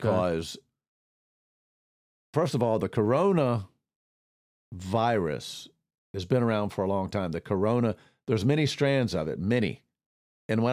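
No technical faults can be heard anywhere in the recording.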